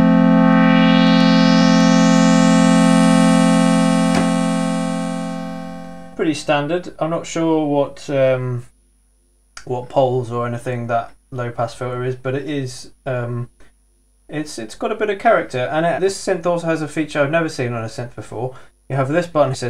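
At 6.13 to 6.15 s, 13.45 to 13.47 s, 15.98 to 16.00 s and 19.53 to 19.55 s, brief glitches of about 20 ms break the sound. Each is damaged data in a compressed stream: corrupted bytes cause the decoder to misread a frame, lose sync and hunt for the next valid header. Unlike a buffer-underrun dropout, which is a clean gap or click, these glitches come from misread codec data.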